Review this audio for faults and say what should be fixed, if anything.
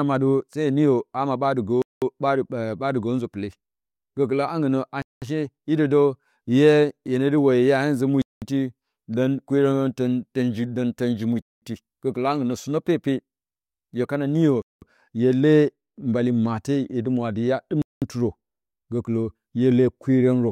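A gap between chunks breaks the speech six times, at 1.82, 5.02, 8.22, 11.42, 14.62 (right after "hye kana niyo") and 17.82 s. Each is a 200 ms silence after every 3 s chunk. Unlike a dropout, no speech is missing; it resumes exactly where it stopped. To prevent it, schedule each chunk to start seamlessly and trim codec padding at the joins.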